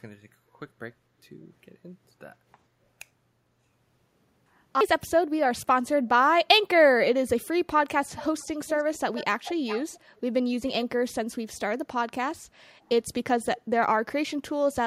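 Between 8.05 and 8.47 s, 8.67 and 8.99 s, 9.15 and 9.24 s, and 9.44 and 9.99 s, an echo leak returns a copy of the speech delayed by 411 ms, sitting about 15 dB below the direct signal. Two much fainter scraps of the same echo follow at 10.16–10.21 s and 13.57–13.61 s. The likely cause is a loudspeaker at the far end whose echo canceller let part of its microphone pickup travel back down the line.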